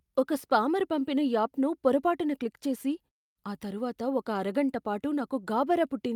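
A speech recording, with nothing technically wrong to report. In the pauses the output fades to silence and the background drops away, then comes back in time for the next sound.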